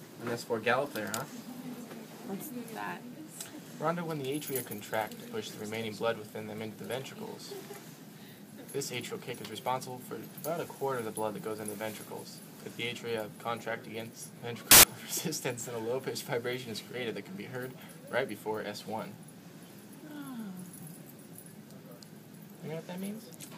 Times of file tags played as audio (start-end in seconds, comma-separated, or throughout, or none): 14.71-14.83